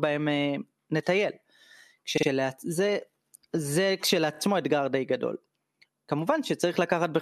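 Speech, with two stutters from repeated frames. At 2.17 to 2.28 s, a 52 ms stretch plays three times in a row, adding about 105 ms. At 4.34 to 4.39 s, a 26 ms stretch also plays three times, adding about 52 ms. The same compressed data reached the decoder more than once, so it replayed that fragment. The block lengths point to frames of about 26 ms, two in the first repeat and one in the second.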